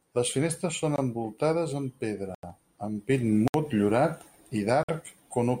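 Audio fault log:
0.96–0.98 s, 2.35–2.43 s, 3.48–3.54 s, 4.83–4.89 s: block of digital silence. The speech drops out and returns with no fade. The first gap falls between "finestres són" and "envoltades amb" and lasts about 21 ms. The second comes after "envoltades amb" and lasts 85 ms. The last two last 64 ms and 53 ms. These longer ones are heard as short holes. The output buffer was likely not filled in time. The first two gaps fit 1024- and 4096-sample buffers.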